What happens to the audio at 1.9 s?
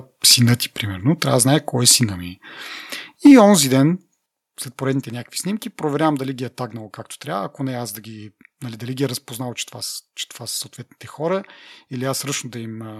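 From 1.88 to 1.92 s the loudest syllable crackles harshly, likely microphone overload: input about 3 dB too hot, flattening peak tops at capture rather than a later codec artefact.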